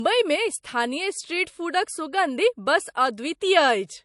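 Throughout the speech, nothing appears above 11.3 kHz, with the swirly, smeared artefacts of heavy lossy coding, likely low-bitrate audio saved at a high bitrate: a coarse MP3 pass near 48 kbit/s, re-encoded near 256 kbit/s, which cannot restore what was removed. A spectrogram shows a flat ceiling at 11.3 kHz.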